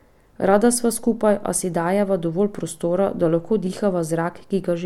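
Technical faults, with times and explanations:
No technical faults detected.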